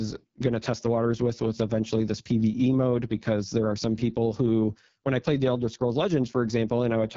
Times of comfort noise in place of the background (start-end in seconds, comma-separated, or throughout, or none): none